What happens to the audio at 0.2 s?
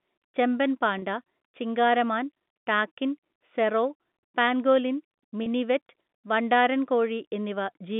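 Nothing goes wrong at 0.2 s: the speech comes through intact there, carried on the narrow telephone band of G.711 coding with no added fault at that moment.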